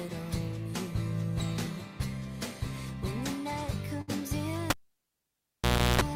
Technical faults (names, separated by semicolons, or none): burst of packet loss; cable pulled and plugged in